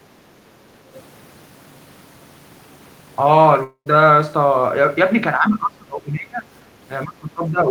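At 3.63 to 3.88 s the speech breaks off for about 0.22 s and a fading buzzy continuation fills the gap, ending in roughly 90 ms of silence before speech resumes with material missing. This is likely a long network dropout. On a spectrogram it shows as smeared, repeated bands thinning into a blank strip.

From 5.38 to 6.47 s, and again from 6.88 s to the end, the speech sinks by up to around 20 dB and goes thin and patchy, likely speech suppressed in double talk by an echo canceller. On the waveform the envelope collapses in uneven chunks, and on the spectrogram the upper harmonics disappear.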